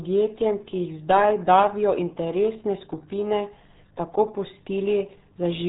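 From start to finish the speech sounds muffled and gargly, with nothing above about 3.8 kHz. That is the RealAudio 14.4 codec, heavily squeezing the sound into what fits an 8 kbit/s dial-up stream.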